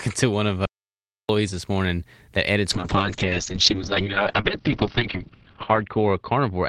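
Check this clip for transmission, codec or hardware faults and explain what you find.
Two faults are audible in this speech recording: a short dropout near the start and a loss of coding quality that lasts to the end.

Audio dropout to silence, 0.65 to 1.29 s: the input stopped reaching the recorder for about 0.64 s, most likely through a brief disconnection or mute, while the writer kept filling the stream with silence. The speech cuts off abruptly into dead silence with no room tone, then resumes mid-flow. Whatever was said in that gap is simply missing.

Call bitrate drop, from 2.70 s to the end: the call's bandwidth estimate fell and the encoder was pushed to a much lower bitrate. The sound points to a fall from around 32 kbps to about 8 kbps, with the poorest stretch lasting 2.44 s. At that rate the audio band narrows from 20 kHz to 6 kHz, so the speech turns muffled, with coarse, watery texture and a loss of crispness in sibilants.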